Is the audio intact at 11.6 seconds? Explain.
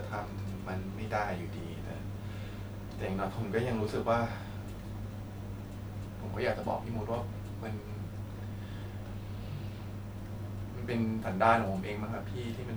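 Yes, at 11.6 seconds the speech plays through intact, with no dropout, click, distortion or other fault at that moment.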